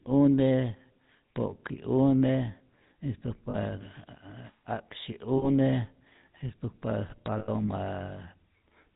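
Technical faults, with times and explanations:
Throughout: GSM full-rate codec. The speech carries that buzzy, gravelly roughness of the old GSM coder, which rebuilds the vocal tract and drives it with a sparse, regular pulse excitation, and nothing above 4 kHz survives. The damage is plainly audible, consistent with 13 kbps full rate.
3.50 to 3.56 s, 5.38 to 5.48 s and 7.38 to 7.49 s: lost GSM frames. Each time the decoder repeats the settings of the last good frame, so the sound freezes into a rough, metallic ring. The first two concealed stretches are about 40 ms and the last about 100 ms, which fits two and then five dropped frames.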